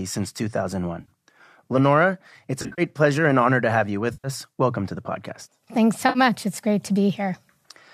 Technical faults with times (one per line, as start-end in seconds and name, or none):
1.00-1.11 AAC frame loss with concealment
2.62-2.82 AAC frame loss with concealment
4.13-4.28 AAC frame loss with concealment
6.08-6.19 AAC frame loss with concealment